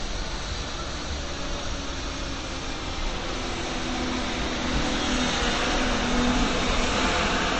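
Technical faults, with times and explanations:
Throughout, transcoding between lossy codecs. Nothing is heard above about 8.3 kHz, so the top end sounds dull and closed in. Two kinds of coding damage sit together and are heard at once. This likely comes from a low-rate MP3 pass followed by a low-rate Vorbis pass. The second encoder wastes bits copying the first one's errors and adds its own. The lowest band limit in the chain remains.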